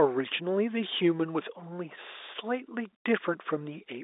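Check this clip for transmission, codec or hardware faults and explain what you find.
No faults turn up here: the speech carries the narrow band of G.711 telephone coding, with content confined to roughly 300 Hz to 3.7 kHz and nothing above 3.8 kHz, which fits an ordinary 64 kbps mu-law line, and any coding damage is faint at most.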